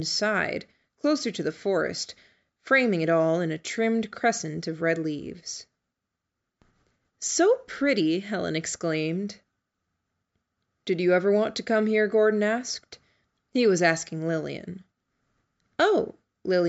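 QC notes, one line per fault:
No faults turn up here; the speech has simply gone through a call's microphone processing, so the lowest bass is trimmed away, which is just how that path sounds.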